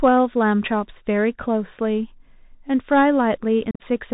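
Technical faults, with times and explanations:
Throughout: Bluetooth CVSD headset codec. The speech is held to a narrow band, with nothing above 4 kHz. A one-bit coder follows the waveform in small steps, so loud high sounds distort, s sounds turn scratchy, and grainy hiss sits underneath. This fits a 64 kbps CVSD link.
3.71 to 3.82 s: unconcealed Bluetooth headset packet loss. About 82 ms of speech drops out across a 90 ms stretch. The longest single hole is 45 ms. The gaps start and stop abruptly, so the speech sounds chopped and crackly. This points to around ten lost packets.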